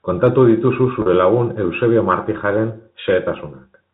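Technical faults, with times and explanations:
1.02 to 1.06 s, packet loss with pitch repetition: about 40 ms went missing, which fits two lost 20 ms packets. The gap was bridged by looping the last pitch period, giving a brief held, buzzy tone. A spectrogram shows frozen, evenly spaced harmonics, and the waveform shows one cycle copied repeatedly.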